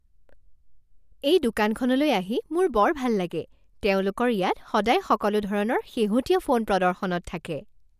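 No technical faults can be heard in this recording.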